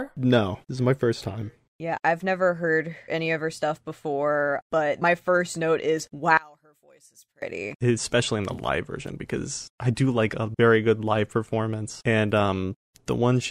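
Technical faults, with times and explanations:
6.37–7.42 s, one channel inverted: the speech falls by about 28 dB to a faint residue, likely because one channel's reversed polarity cancels the shared centre content when summed.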